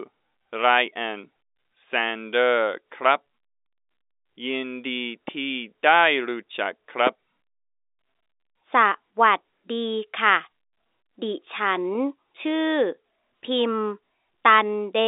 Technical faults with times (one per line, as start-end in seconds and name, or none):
5.28-5.31 loud pop